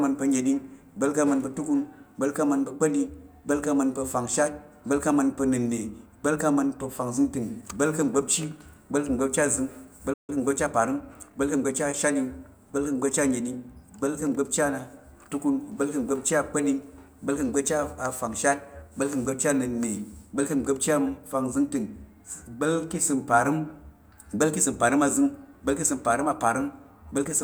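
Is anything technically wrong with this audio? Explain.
Yes, there are two linked faults. At 10.13 s the speech halts mid-flow in a playback stall, leaving about 150 ms of silence before it resumes at 10.30 s. The likely cause is the player running short of buffered data, or its output thread being held up, so nothing was sent to the output until it recovered. Unlike a dropout, where a stretch of audio vanishes, here the output simply fell silent until the player recovered.

From 10.30 s to 11.78 s comes time-compressed catch-up. To recover the delay the stall caused, the player trims tiny segments and cross-fades across the joins, running about 1.1 times faster. The speech sounds rushed but stays at its natural pitch. That steady pitch separates it from a plain speed-up or clock mismatch, where faster playback would also raise the voice.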